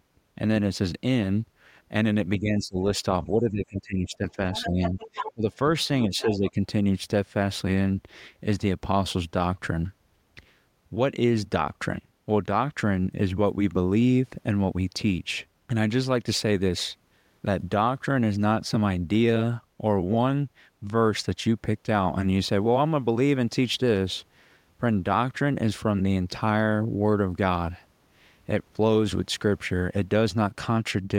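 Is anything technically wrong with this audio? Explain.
Yes. The speech is suppressed in double talk four times: 2.4 to 2.78 s, 3.31 to 4.37 s, 4.64 to 5.58 s and 6.09 to 6.58 s. The talker's level dips by up to roughly 20 dB, and the 3.31 s stretch loses about a second in total. The likely cause is an echo canceller that heard both parties at once, could not separate them, and turned everything down. On a waveform the envelope sags or gaps mid-phrase.

The other side's voice is leaking through from 4.53 to 5.33 s and again from 6.21 to 6.51 s, sitting roughly 10 to 15 dB below the main speech. It sounds faint, a second voice behind the talker. This is likely loudspeaker playback that the canceller did not fully remove from the microphone. On a spectrogram it appears as weak, separate harmonic traces overlapping the dips at 4.64 s and 6.09 s.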